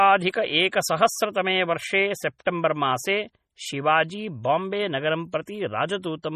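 Throughout the speech, the audio was likely squeezed through MP3 compression at a very low bitrate, something on the order of 32 kbps, leaving the encoder short of bits from start to finish. It has discarded everything above 15 kHz and dropped quieter frequency detail that flickers in and out between frames. The result is heavy damage: a watery, swirling texture over the whole clip, metallic chirping on s sounds, and consonant onsets that blur rather than snap.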